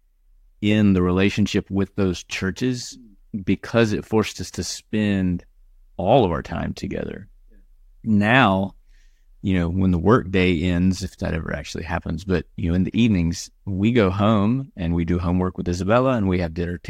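No technical faults are audible anywhere in the recording.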